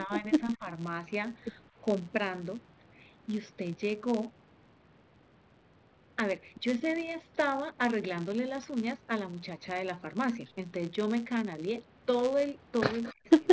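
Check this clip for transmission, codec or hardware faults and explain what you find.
Three kinds of fault are audible: a constant block-rate buzz, two stretches where the speech is pushed down, and a brief echo near the end.

The filter restarted on every block, for the whole clip. A filter in the chain loses its memory at each block boundary and starts again from silence, leaving a small transient every time. The result is a buzz at 125 Hz, which fits a 128-sample block, and it grows louder and softer with the speech.

Speech was suppressed in double talk between 0.04 and 0.66 s and again between 13.11 and 13.29 s. The echo canceller likely mistook simultaneous talk for echo and attenuated the near talker. The voice dips by about 15 dB for a few tenths of a second early on, then drops by about 40 dB, nearly cutting out, at the end.

An echo leak appears between 13.03 and 13.14 s. The far side's echo canceller likely missed part of its loudspeaker pickup and sent it back. 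The result is a faint delayed copy of the speech, trailing by 219 ms at roughly 25 dB below it.

The call microphone processing removes the lowest bass as expected.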